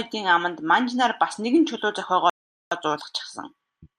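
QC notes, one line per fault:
2.30–2.72 s, playback stall: right after "нар бас нэгэн чулуу" the speech cuts to silence for about 0.42 s, likely the player starving for data or its thread getting blocked.
2.72–3.99 s, time-compressed catch-up: the speech then runs about 1.15x fast at normal pitch, as small slices get cut and cross-faded to clear the backlog.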